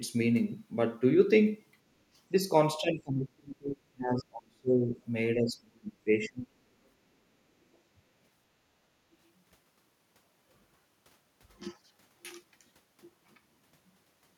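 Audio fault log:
2.78–5.0 s and 5.36–6.49 s, speech suppressed in double talk: the voice sinks by about 30 to 35 dB in pieces, likely an echo canceller turning the talker down while the far end spoke.
9.04–9.19 s, background gated by the echo canceller: room sound dips by about 10 dB for a brief moment as the canceller clamps the microphone during loudspeaker playback.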